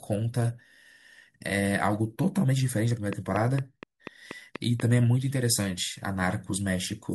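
From 3.13 s to 4.81 s there's a train of clicks running over the speech: about seven sharp ticks, evenly spaced at 4.19 per second, all with much the same shape. They stand out roughly 10 dB above the voice, so they're hard to miss. A steady pulse like that, dropped in from outside the audio, is likely interference from nearby gear or a faulty connection or power supply.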